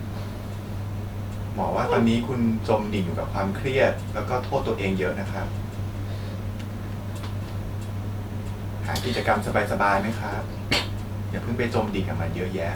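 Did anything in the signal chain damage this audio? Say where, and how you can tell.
No, the signal chain did no audible damage here.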